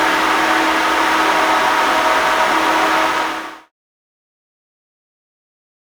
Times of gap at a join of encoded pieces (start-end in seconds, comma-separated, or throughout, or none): none